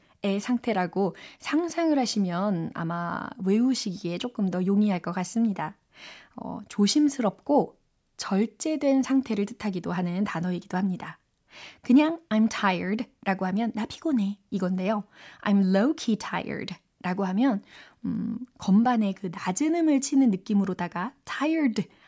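No technical faults occur at any point in the clip, so there is nothing to place in time order.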